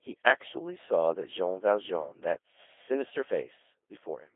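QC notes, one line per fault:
throughout, Codec 2 vocoder: speech is resynthesised from sine waves at a rate fitting 2.4 kbit/s, so it sounds heavily robotic and buzzy, with nothing above 3.7 kHz.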